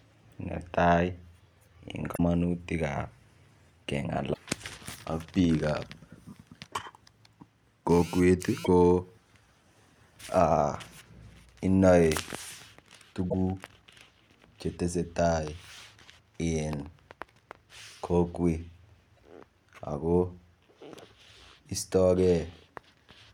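Speech, marred by damaged data in a compressed stream. Short glitches occur at 2.13–2.20, 4.30–4.38, 8.61–8.68, 13.26–13.34 and 19.17–19.19 s. Corrupted bytes there make the decoder misread frames and lose sync. Each one sounds like a brief chirp, squawk, click or short hole.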